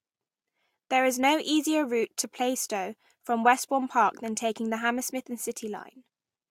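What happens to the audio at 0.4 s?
Nothing goes wrong at 0.4 s; the audio plays through that moment intact, with no dropout, click or distortion.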